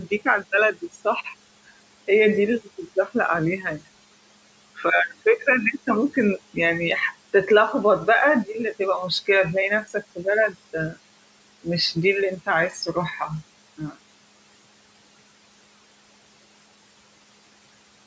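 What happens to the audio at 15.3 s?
At 15.3 s, as throughout the clip, noise suppressor artifacts are present: frame-by-frame gain cuts pull the room noise down by about 21 dB between phrases, so the noise sinks between the words and rises under them. A spectrogram shows a blotchy, gated noise floor pumping with the speech.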